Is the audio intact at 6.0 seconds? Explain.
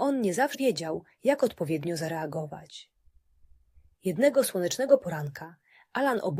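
Yes, the audio is intact at 6.0 seconds, with no dropout, click, distortion or other fault audible at that point.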